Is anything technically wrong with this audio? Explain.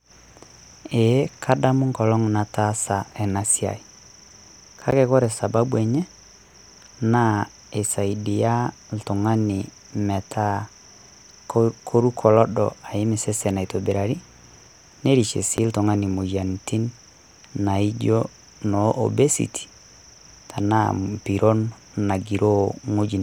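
Yes. Two blocks of digital silence, at 4.91 s (about 11.6 ms, which fits a 512-sample buffer left unfilled) and 15.57 s (about 9.1 ms), cut the speech out with no fade, each heard as a tick or dip.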